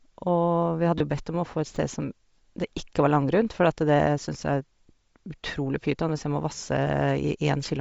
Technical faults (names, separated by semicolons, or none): Bluetooth LC3 compression; lost LE Audio frames; repeated buffer